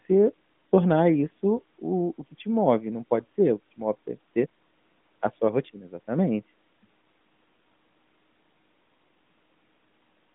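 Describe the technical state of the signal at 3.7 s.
At 3.7 s the signal is intact, with no fault at that moment, and the narrowband AMR mobile codec path it passes through is working normally there.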